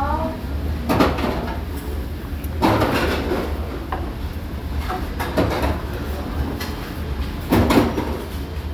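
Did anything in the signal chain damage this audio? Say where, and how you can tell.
No, nothing in the signal chain stood out as damaging when listening to this audio.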